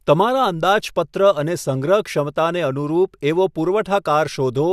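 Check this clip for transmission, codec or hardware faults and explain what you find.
Nothing to report: no faults heard anywhere in the speech.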